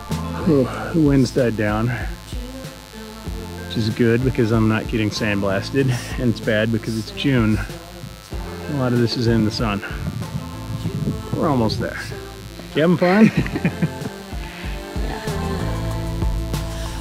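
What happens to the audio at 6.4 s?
At 6.4 s, as throughout the clip, mains buzz is present: switching spikes from the 50 Hz supply leak in twice per cycle, spraying harmonics up into the kilohertz range. The result is a steady, raspy buzz sitting roughly 20 dB below the sound.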